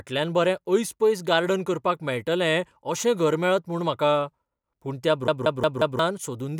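From 5.27 to 5.99 s the speech falls into a CD stuck on one turn: a scratch keeps throwing the laser back, so a 179 ms slice repeats four times with brief mutes at each jump. It sounds like a fast, even stutter, and the waveform shows identical blocks separated by thin gaps.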